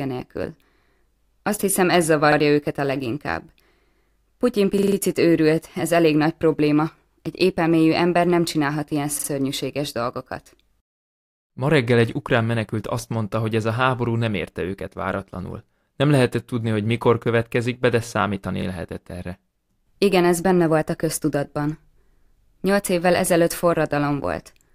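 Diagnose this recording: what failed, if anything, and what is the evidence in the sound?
Repeated buffer at the driver/buffer stage: late data made the last 46 ms block replay at 2.32, 4.78, 9.2 and 18.62 s. The waveform shows identical stacked segments with hard seams.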